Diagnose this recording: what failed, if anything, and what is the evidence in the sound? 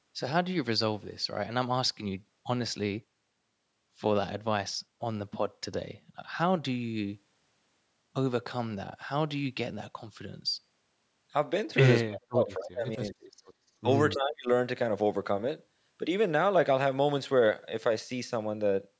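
Speech suppressed in double talk at 12.04–13.24, 13.82–13.86 and 14.14–14.5 s: call-processing dips of up to about 35 dB, likely from the echo canceller ducking overlapping talk.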